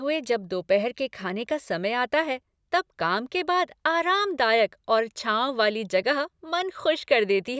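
No technical fault can be heard anywhere in the recording. There is nothing to place on the timeline and nothing to trace back to a cause.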